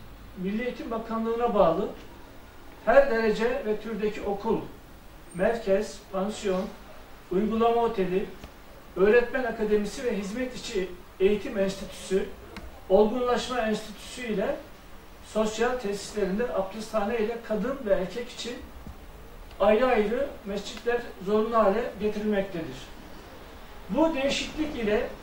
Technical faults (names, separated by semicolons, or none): DAB burbling